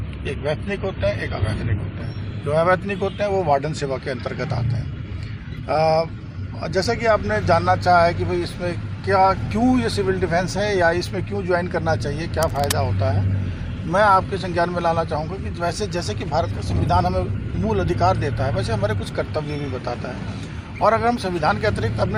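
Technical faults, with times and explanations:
0.0–2.0 s, adaptive stream starting at a low bitrate: the opening lacks treble, with nothing above 11.4 kHz, and codec smearing is stronger. The detail then returns abruptly, without a gap, which fits a player switching from a low-bitrate version to a higher one rather than a dropout or a filter sweep.
12.40–12.72 s, cable scratch noise: a dense, uneven burst of scratchy rustle sits about 10 dB below the sound for about a third of a second. This is likely a worn cable or connector being moved. It is irregular and dense, unlike isolated digital clicks or steady hum.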